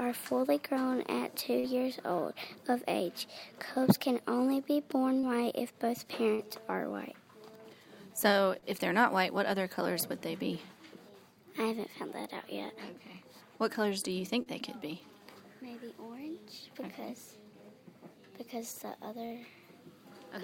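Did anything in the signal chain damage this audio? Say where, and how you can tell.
Yes, on the network side. Short concealed packet loss at 1.59, 5.19, 6.35, 8.59 and 14.42 s: each loses 40 ms, papered over by extending the preceding sound into a brief smear.

A burst of packet loss at 19.26 s: the receiver fills 48 ms by continuing the last sound and fading it down, then resumes with 40 ms missing.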